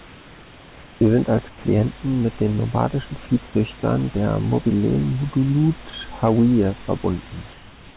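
From 0.00 to 1.01 s, at 1.49–1.64 s just before "mit den nomadischen", and from 7.52 s to the end, the room background gives way to comfort noise in place of the background, likely from discontinuous transmission. The noise is smooth and featureless, about 2, 5 and 3 dB quieter, and band-limited near 4 kHz like the rest of the call. Unlike a gate or dropout, the pauses never fall silent. Their texture flattens.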